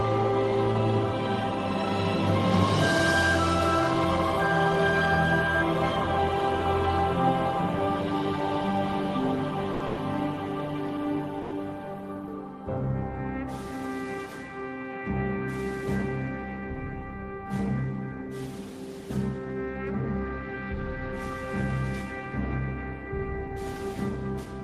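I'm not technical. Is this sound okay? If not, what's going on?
No. There are three brief hiccups, all from data arriving late.

Short stall from a late packet, at 9.73 and 11.42 s: a piece of audio arrived late, so the receiving end held the last sound for about 70 ms and then 90 ms. You hear a sound drawn out oddly, with nothing lost.

Call audio freeze, from 9.86 to 10.00 s: the sound sticks and turns into a fading buzz for about 110 ms, then carries on where it left off. The likely cause is a run of data held up on the way.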